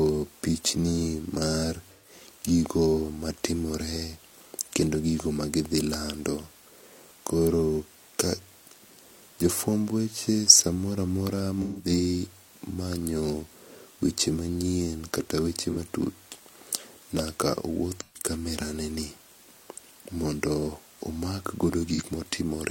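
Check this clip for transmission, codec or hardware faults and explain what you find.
The speech has AAC frame loss with concealment at five points: 1.94–2.12 s, 11.62–11.89 s, 15.71–15.77 s, 18.00–18.30 s and 21.94–22.02 s. The gaps run from about 43 ms to 171 ms, which fits whole AAC frames going missing. The decoder covers each gap by reusing the last good spectrum. This leaves brief smeared, noisy or phasey patches in place of the lost audio.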